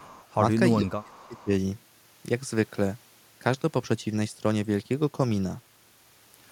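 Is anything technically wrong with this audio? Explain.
Yes. From 0.00 to 0.36 s and again from 1.12 to 1.44 s, a faint copy of the speech trails the original by about 0.4 s, sitting well below the main level. This is likely an echo leak: a loudspeaker's output reached a microphone, and the echo canceller failed to remove all of it before sending it back.

Between 0.78 and 1.50 s the speech drops away sharply, sinking deeply in places for most of that stretch, while the echo overlaps it. This is likely speech suppressed in double talk: with both sides active, the canceller attenuated the genuine talker along with the echo.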